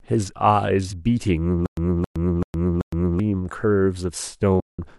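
From 1.66 to 3.20 s there's a stutter with silent gaps: a 270 ms chunk of speech plays four times, each followed by about 113 ms of dead silence, so it pulses every 384 ms. That's likely a stalled stream replaying its last buffer, and whatever speech belonged there is gone.

Then at 4.60 to 4.79 s comes AAC frame loss with muting. About 190 ms drops out, faded softly at both edges, which fits a run of roughly 10 ms frames being zeroed by the decoder. The likely low-delay AAC coding itself, with its light damage, is working normally.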